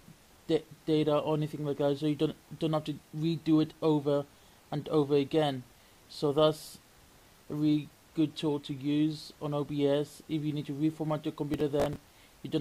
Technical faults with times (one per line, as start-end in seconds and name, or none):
11.54-11.96 processor overload crackle